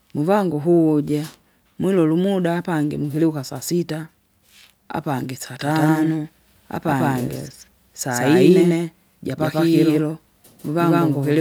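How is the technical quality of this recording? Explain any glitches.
One real problem. From 5.6 s to the end there's a doubled audio track: an equally loud, dry copy trails about 150 ms behind, likely captured twice by a slower path.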